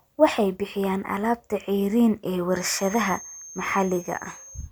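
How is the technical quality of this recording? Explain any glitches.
The recording has one fault, a feedback whistle. From 2.46 s to the end, a thin, steady tone at 6.4 kHz sits roughly 20 dB below the speech, swelling and fading slowly in level. It is likely a loudspeaker-to-microphone loop held just short of runaway, so one frequency keeps ringing without building up.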